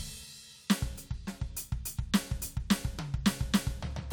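Listening through this music clip, nothing stood out as a technical fault at any point.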